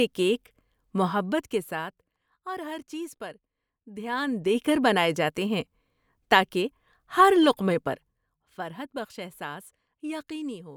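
From 1.02 to 2.28 s the level drops by roughly 15 dB with zipper noise: the gain falls in unsmoothed 1 dB steps, about twenty a second, and each jump puts a small click into the speech, giving a rapid ticking over the fade. The same fault returns from 3.99 to 4.60 s as the level climbs back by roughly 15 dB, ticking at the same rate until the gain settles.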